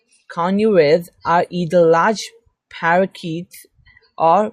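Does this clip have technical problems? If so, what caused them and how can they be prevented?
No, no technical problems can be heard here.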